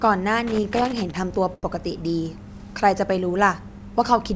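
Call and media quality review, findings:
Loose connector crackle, 0.47 to 1.17 s. Worn or dirty contact, making and breaking under movement. Signal chopped intermittently. Heard as an irregular scratchy burst over the speech.

Short stall from a late packet, 1.54 to 1.70 s. Packet late, jitter buffer ran dry. Receiver stretched the last sound by about 89 ms, then resumed where it left off. Nothing lost, but sound held too long and playout pushed 89 ms later. G.722 path at 64 kbps, no content above 8 kHz.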